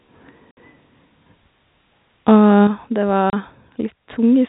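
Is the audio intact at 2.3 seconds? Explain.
No. Microphone overload hits from 2.28 to 2.30 s. The peaks there run about 2 dB past the converter's limit and their tops are sheared flat, roughly 3% of samples, giving a brief harsh crackle. The likely cause is input gain set too high.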